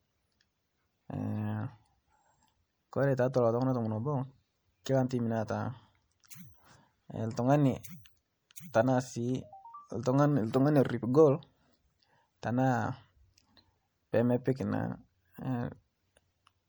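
From start to finish the speech sounds watery and swirly, with s sounds chirping metallically and the top end dulled. That's likely MP3 compression at a bitrate around 64 kbps, where the encoder runs short of bits, cuts the treble and lets weak frequency lines flicker between frames.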